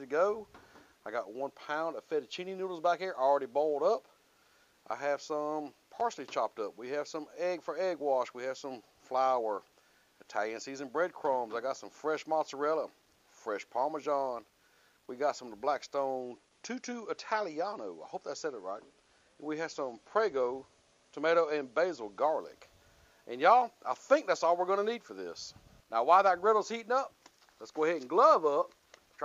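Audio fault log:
16.21–22.21 s: adaptive stream at a lower bitrate. The quality drops suddenly with no gap, as the stream likely switched to a lower-bitrate version, which fits a move from 128 to 48 kbit/s MP3. Nothing above 11.3 kHz remains, so the treble is dulled and codec artefacts rise until full quality returns.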